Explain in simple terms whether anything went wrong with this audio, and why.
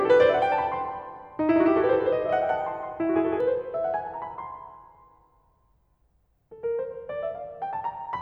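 Something did go wrong. From about 1.5 to 3.4 seconds the music has a doubled audio track. A second copy of the same music plays along, roughly 150 milliseconds behind, at about the same loudness as the first. The copy has no fading tail or room sound, and it cuts in and out suddenly. This is likely caused by the sound being picked up twice, once through a slower route.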